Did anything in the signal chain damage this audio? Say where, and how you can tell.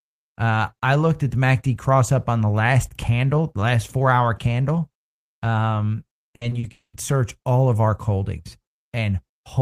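Yes. Repeated packet loss (robotic sound) hits the network stage from 6.27 to 6.65 s, just after "four hour candle um". There are four gaps, the longest 60 ms. About 140 ms is patched by extending the previous sound, so roughly a third of that stretch turns choppy.

A long network dropout follows at 6.71 to 6.95 s, before "search all of our", likely caused by the network. About 220 ms never arrives. The held sound fades to roughly 110 ms of silence before the audio resumes with that piece missing.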